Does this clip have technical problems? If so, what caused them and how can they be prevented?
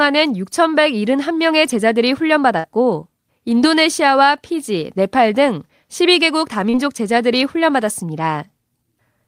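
Yes: short concealed packet loss at 2.59–2.66 s and 6.70–6.75 s. About 40 ms arrived too late, and the receiver extrapolated the previous sound, appearing as smeared, repeated harmonics or shaped noise with softened edges on a spectrogram. Larger jitter buffers or forward error correction prevent this.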